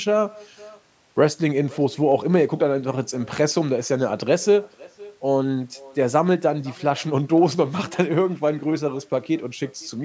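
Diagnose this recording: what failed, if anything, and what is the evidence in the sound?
The failure is in call processing: echo with no canceller, present for the whole recording. Every stretch of speech is trailed about half a second later by a faint, thinner copy, roughly 25 dB below the direct sound. The far end's loudspeaker fed its microphone and no echo canceller removed it. On a spectrogram, each syllable's pattern reappears as a weak ghost shifted right by that delay, inside the normal call band that stops at 8 kHz.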